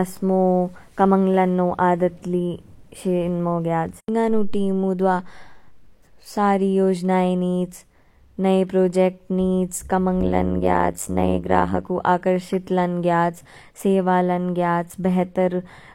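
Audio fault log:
10.21–11.88 s, overlap-add ripple: The speech takes on a harsh, buzzy tremolo for this stretch. The level swings around 100 times a second, and the dips reach about 60 dB below the peaks. The audio was split into windowed frames and joined again. The overlapping windows did not sum to a steady gain. Each frame boundary left a deep notch in level. That repeating notch makes the metallic buzz.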